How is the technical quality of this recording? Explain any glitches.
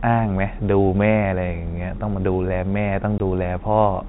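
One glitch is audible: a short dropout with hard edges, heard against speech carried at telephone bandwidth, where nothing above 4 kHz comes through.

At 3.18 to 3.2 s the speech cuts to dead silence for 20 ms and snaps back. This is packet loss filled with silence. A chunk of audio never reached the receiver, which played nothing in its place. A 20 ms hole fits the loss of a single 20 ms packet, and the abrupt cut-out and resume give the gap its hard edges.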